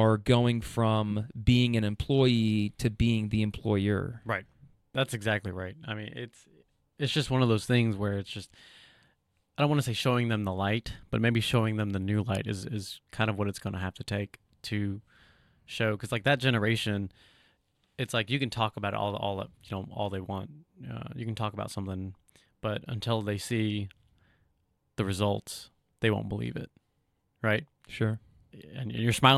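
No audible technical faults turn up anywhere in this speech recording.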